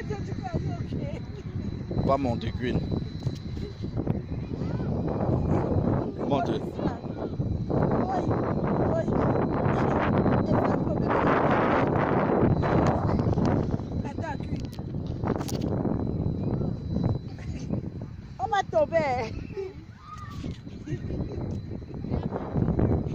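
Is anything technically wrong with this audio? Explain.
No, the signal shows no technical faults anywhere in the clip.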